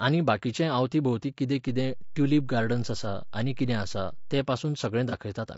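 Across the whole clip the speech has a rough, grainy texture, with noise filling the gaps between pitch harmonics and a top band that sounds thinned and somewhat synthetic. This is likely low-delay AAC compression of the AAC-ELD kind used for video calls. Its short frames resolve voiced harmonics poorly and spend bits less efficiently, and the damage is plainly audible here, which fits a bitrate around 32 kbps.

At 1.68 s, just after "बाकीचें आवती भोवतीं कितें", a DC step occurs. The waveform's zero line jumps to a new offset, as happens when a converter recalibrates or an input carrying an offset is switched in. The jump is heard as a low thump while the speech carries on unchanged. The offset holds until 4.39 s, where it ends.

From 5.09 to 5.14 s there is AAC frame loss with concealment. Data went missing, which points to a single lost frame of about 30 ms, and the decoder filled the gap by reusing the last good spectrum with altered phase or interpolated energy. 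Because the gap is short, it does not fade to silence. It comes through as a brief smeared, noisy patch in the speech, about 50 ms long.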